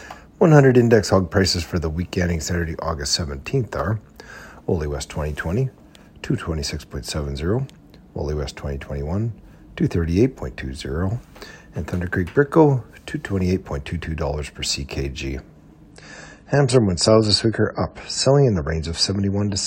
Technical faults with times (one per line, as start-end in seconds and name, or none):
15.91-19.67 adaptive stream at a lower bitrate